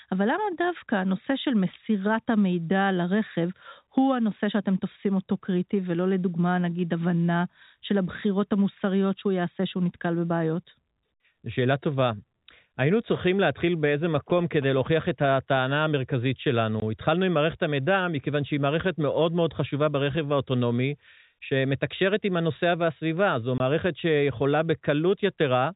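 From 14.15 to 15.72 s, GSM signalling bursts from a nearby 2G handset break into the speech. The phone is only signalling, so it transmits short groups of radio bursts rather than a continuous stream, and the audio circuitry rectifies that RF into the signal. The result is a galloping dit-dit-dit run of brief buzzes at about 217 Hz, sitting roughly 15 dB below the speech.

Two dropouts follow, from packet loss filled with silence, at 16.80 to 16.82 s and again at 23.58 to 23.60 s. Each is a 20 ms hole, which fits a single lost 20 ms packet that the receiver replaced with digital silence instead of concealing it. The speech is cut off abruptly, with hard edges on either side of each gap. Across the clip, the G.711 telephone band limit holds everything under 4 kHz.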